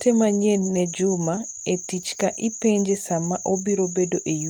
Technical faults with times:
1.35-1.39 short concealed packet loss

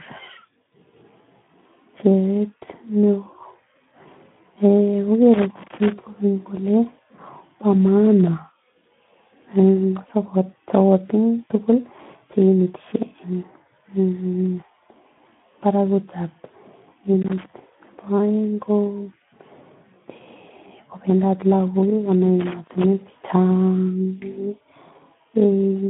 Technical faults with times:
0.00-25.89 Speex codec

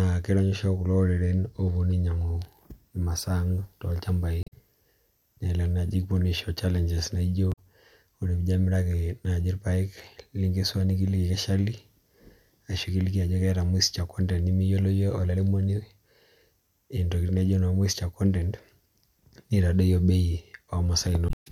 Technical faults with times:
1.84-1.87 damaged data in a compressed stream
4.40-4.53 damaged data in a compressed stream
7.49-7.59 damaged data in a compressed stream
21.26-21.47 damaged data in a compressed stream

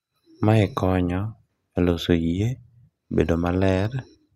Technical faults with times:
none

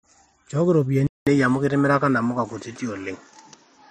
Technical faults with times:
1.07-3.91 input switched to a poorer device

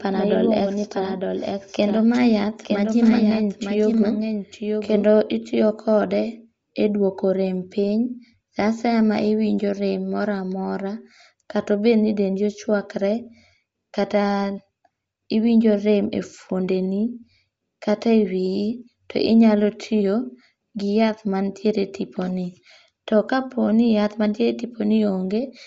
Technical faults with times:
0.00-25.67 Bluetooth LC3 compression
0.00-5.04 doubled audio track

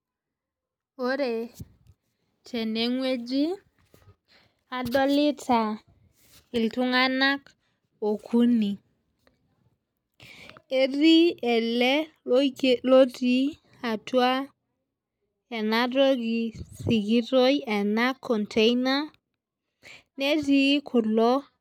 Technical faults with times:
none

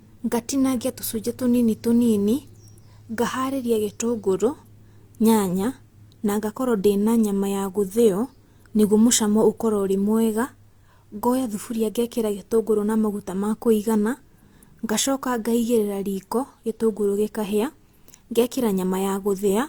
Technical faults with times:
none

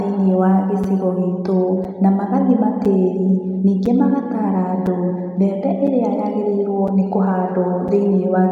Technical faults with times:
0.84 gap between chunks
1.84 gap between chunks
2.85 gap between chunks
3.86 gap between chunks
4.86 gap between chunks
5.87 gap between chunks
6.88 gap between chunks
7.88 gap between chunks

